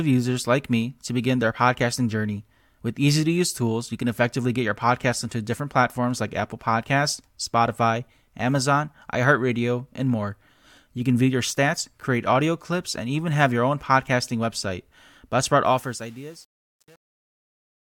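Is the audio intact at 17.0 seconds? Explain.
No. At 17.0 seconds the audio sits inside a span of truncation distortion on a fade, running from 15.66 s to the end at 17.93 s and worst from 15.76 s onward. The level stage keeps too few bits and adds no dither, which fits an 8-bit path. As the signal shrinks toward the smallest step, the waveform collapses into coarse square steps, so the tail sounds gritty.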